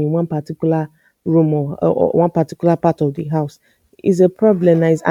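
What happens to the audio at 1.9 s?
Nothing goes wrong at 1.9 s: the speech carries on intact through that moment, with no dropout, click or distortion to be heard.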